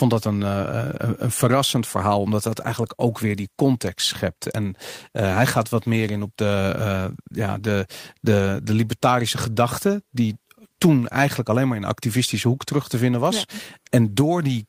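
Listening to this speech recording, nothing technical stood out at any point.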